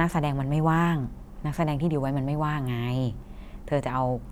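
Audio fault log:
No faults heard in this speech.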